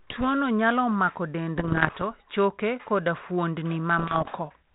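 From 1.56 to 2.03 s, and again from 3.99 to 4.37 s, the speech breaks into pops and rough, gritty bursts with brief jumps in level. These are bit errors on an ADPCM link, at a rate of around one percent. Each flipped bit corrupts the decoder's step size and prediction, so the damage rings on for several milliseconds rather than staying a single click. The underlying G.726 coding, band-limited below 4 kHz, sounds consistent with 32 kbit/s.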